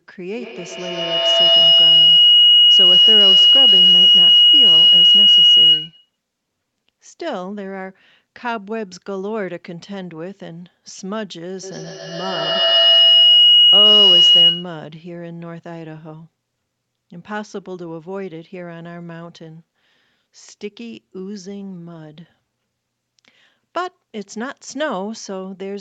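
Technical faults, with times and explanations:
0.38–6.19 s and 11.63–14.94 s, feedback howl: a mic-to-speaker loop keeps gaining, repeating roughly every 150 ms and building a tone near 3 kHz that peaks about 15 dB over the speech.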